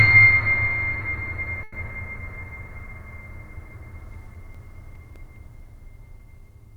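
At 1.63 s a packet of the music arrived late and the jitter buffer ran dry, producing a short stall from a late packet. Rather than skip ahead, the receiver held the last sound in place for about 90 ms until the packet turned up, then resumed from the same point, so nothing is lost. Through 1.75 s a sustained sound hangs on too long, and everything after it plays about 90 ms later.

From 3.73 to 5.36 s a blemish on the disc corrupted more data than error correction could rebuild, once per revolution, giving CD scratch ticks. The player patched or silenced the damaged samples each time the spot came round. Nine ticks follow one another at a steady rate of roughly five or six per second, each a tiny click or dropout of only a few milliseconds, of uneven strength.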